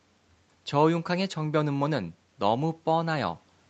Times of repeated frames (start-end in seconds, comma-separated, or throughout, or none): none